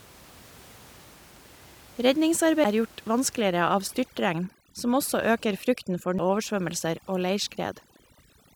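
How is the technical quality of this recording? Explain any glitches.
The speech is marred by two disc skips and by heavy-handed noise reduction over most of its length, while the room noise sits steadily about 26 dB under the speech before processing sets in.

At 2.64 s and again at 6.19 s there is a CD skip. The laser lost its track and landed on another turn of the spiral, so playback mutes for only a few milliseconds and then resumes elsewhere, heard as a tick and an abrupt jump in the speech.

From 3.41 s to the end, overdone noise removal takes hold. The reduction gates frequency bands whenever they approach its noise estimate, stripping quieter speech detail along with the room noise. The background drops and breaks up into twinkling specks.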